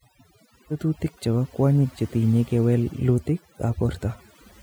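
A noise reduction stage set too strong shows as overdone noise removal throughout, cutting frequency bands near its noise estimate, leaving near-silent gaps with twinkling specks.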